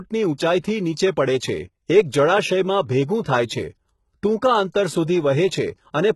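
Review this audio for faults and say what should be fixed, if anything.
HE-AAC compression, likely at a bitrate around 16 kbps, runs throughout: rebuilt treble stops at 11.8 kHz, and s sounds turn gritty and lispy from copied bands. Encode at a higher bitrate or deliver the speech in a lossless format.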